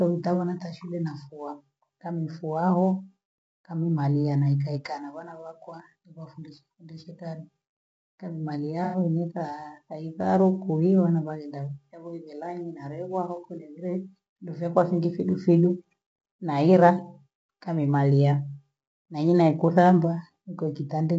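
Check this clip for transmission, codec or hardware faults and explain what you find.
Two faults are audible: a codec coloration running through the whole speech clip, and one brief dropout patch.

Throughout, the voice sounds rough and grainy, with noise filling the gaps between harmonics and a thin, synthetic-sounding top end. This is likely low-delay AAC compression (AAC-ELD), whose short frames resolve pitch poorly; the plainly audible damage points to a bitrate around 32 kbps.

From 8.84 to 8.98 s there is a smeared, noisy patch where the sound loses its definition. This is AAC frame loss with concealment: the decoder rebuilt the missing stretch, about 90 ms and consistent with three lost frames, from the last good spectrum.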